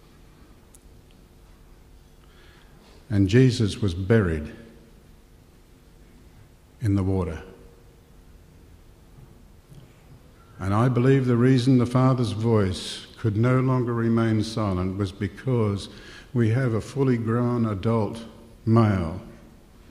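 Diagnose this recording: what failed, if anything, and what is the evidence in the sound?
Nothing failed; no faults detected.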